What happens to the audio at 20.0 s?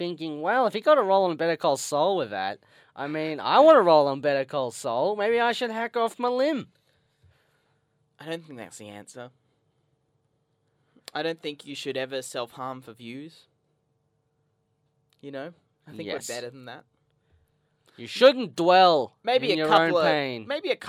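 At 20.0 s the audio is intact, with no dropout, click, distortion or other fault at that moment.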